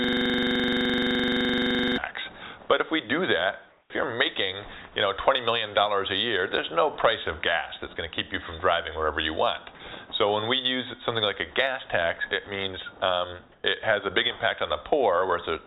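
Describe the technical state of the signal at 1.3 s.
System hang loop, under way from the start until 1.98 s: a frozen system kept replaying one 42.67 ms buffer, likely 2048 samples, giving a steady 23.4 Hz buzz.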